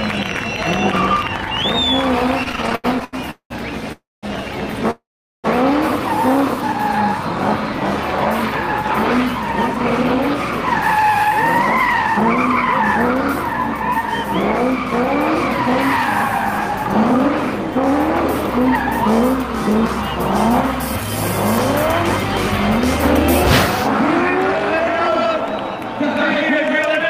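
From 2.43 to 3.52 s, packets arrived late over and over, so the jitter buffer kept running dry and the receiver stretched the last sound to cover the waits. The result is repeated stalls (stutter): twelve brief hangs, the longest 196 ms, filling about 470 ms, nearly half that stretch. The audio drags and stutters, yet nothing is lost.

Two call audio freezes follow, likely caused by packets being held up in transit until the buffer emptied. At 3.92 s the last sound hangs on and fades, ending in 200 ms of silence, and the audio resumes at 4.25 s about 300 ms later than it would have. At 4.91 s a longer hold fades into 420 ms of silence before resuming at 5.46 s, adding about 530 ms more delay. In both, the audio picks up where it stopped.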